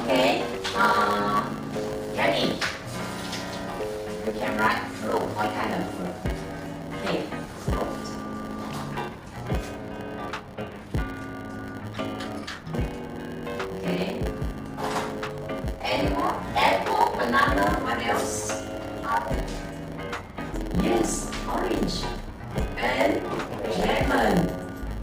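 Block size mismatch (padded), throughout the clip: one stage hands on shorter blocks than the next stage takes in, and each block is topped up with zeros. The repeated short gaps set up a buzz at 100 Hz, and the audio runs at about 0.92 times normal speed with its timbre essentially unchanged.

Loose connector crackle, from 3.50 to 3.57 s: a worn or dirty contact briefly flickers between making and breaking, chopping the signal for a fraction of a second. This comes through as a short, irregular scratchy burst of crackle over the sound.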